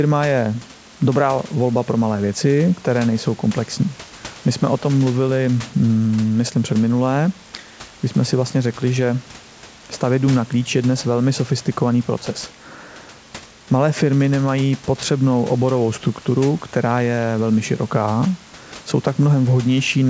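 Nothing stood out on listening to this speech recording.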